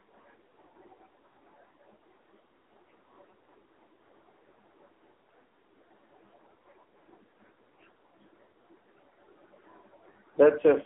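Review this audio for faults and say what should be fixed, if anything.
Throughout the recording the speech sounds thin, buzzy and synthetic, like a weak mobile call. Nothing is present above 3.6 kHz, and the usable band sits between roughly 250 Hz and 3.5 kHz. This is the AMR narrowband mobile codec, heavily applied. The signal was squeezed into an 8 kHz telephone channel and rebuilt from a coarse vocal-tract model excited by sparse pulses. The strong buzz fits one of the lower AMR-NB modes, around 6.7 kbps. To prevent it, capture or transfer the audio over a wideband path or as a direct file upload rather than through a narrowband mobile call.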